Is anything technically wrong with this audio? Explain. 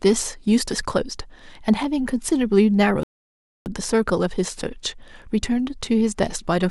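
Yes. At 3.03 s the speech halts for a rebuffering stall, going silent until 3.66 s. The player ran short of downloaded audio and waited, adding about 0.63 s. Unlike a dropout, speech resumes exactly where it stopped, with nothing skipped.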